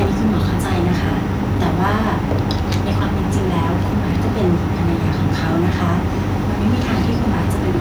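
From the start at 0.00 s to the end, the speech carries a harsh, crackling edge on its loudest syllables, a sign of microphone overload. The likely cause is input gain set about 7 dB too hot, so peaks run into the converter's ceiling and a small fraction of samples have their tops flattened. At 0.07 s the whole level, speech and background together, drops abruptly by about 2 dB, a microphone volume step down. This is likely the call software reacting to the clipping by cutting the device's input gain in a single move rather than a gradual fade.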